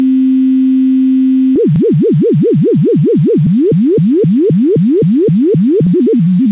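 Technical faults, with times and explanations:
1.76 to 1.78 s, skip ahead: playback leaps forward with no fill, dropping roughly 0.4 s of sound, so the material on either side is spliced almost directly. Audio was dropped in transit or by the overflowing jitter buffer while newer audio waited, cutting the delay by about that amount. On a waveform the envelope changes abruptly at the join with no silent gap; on a spectrogram the harmonic patterns break off and restart mid-contour, capped at 4 kHz by the G.711 mu-law path.
1.86 to 3.38 s, jitter buffer speed-up: the sound runs about 6% fast at unchanged pitch and feels slightly hurried. After the backlog built up, the receiver trimmed many short slices, each one or a few pitch periods long, removing roughly a tenth of a second in total to bring latency back down. A spectrogram shows harmonics at normal spacing but events packed closer in time. 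The waveform shows periodic cycles shortened or missing at small, repeated splice points.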